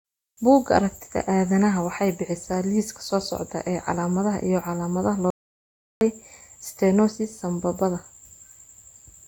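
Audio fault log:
5.30–6.01 s, audio dropout to silence: right after "calaamadaha iyo calaamadaha" the speech cuts off mid-flow. It returns about 0.71 s later. The gap is silent, with no room tone or background hiss. That points to the input being lost while the recorder kept writing silence. A dropped connection or a brief stray mute is the likely cause. Whatever was spoken in that stretch is missing, so the sentence resumes abruptly.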